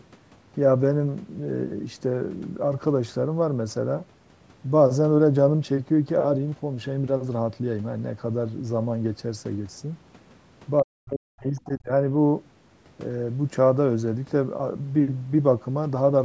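An echo canceller that likely left part of the far end's loudspeaker signal in the microphone lets the other side's voice leak through at 10.78 to 10.82 s as a very faint scrap, far below the speech, and again at 11.56 to 11.71 s, somewhat louder but still faint, roughly 25 dB down.

With both sides talking at once, the canceller likely could not separate the near talker from the echo and turned everything down. This suppression in double talk runs from 10.82 to 11.9 s, about a second in total. The speech dips sharply by as much as about 40 dB.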